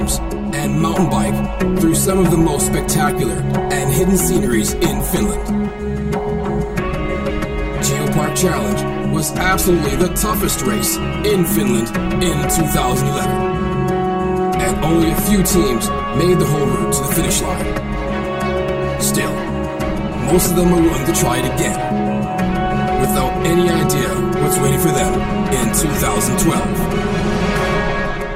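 Channel delay (comb filtering) runs throughout: one channel arrives roughly 5 ms late, and summing to mono cancels their shared content at evenly spaced frequencies, starting near 100 Hz and repeating about every 200 Hz, leaving the sound hollow and phasey.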